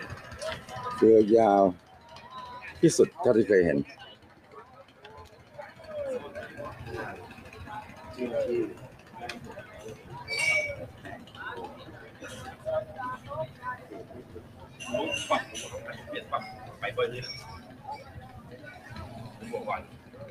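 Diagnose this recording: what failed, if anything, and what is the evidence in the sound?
The failure sits in call processing: a speech-tuned noise suppressor was left on across the whole clip and is treating this sound as if it were background noise. You can hear the level breathing in and out by something like 15 dB as the gain tracks what it thinks is noise. Sustained parts and tails get pulled down while transients slip through, so the sound pumps and thins rather than holding steady.

The clearest sound cut by the noise suppressor shows up at 1.77–2.12 s, 4.15–5.56 s, 8.89–9.15 s, 9.65–10.09 s, 10.92–11.35 s, 13.18–14.8 s, 17.62–18.59 s and 19.84–20.17 s. Each time, the held or decaying material sinks by about 6–7 dB, for anywhere from a fraction of a second to around a second. The suppressor has judged those stretches stationary enough to be noise and cut them harder than the surrounding attacks.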